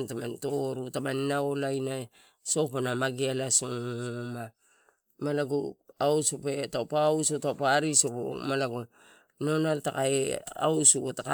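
Speech, with no audible faults.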